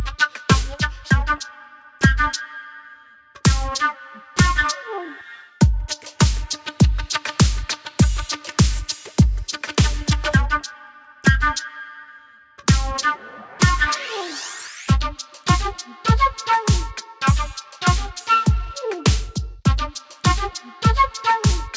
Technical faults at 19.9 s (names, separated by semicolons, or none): none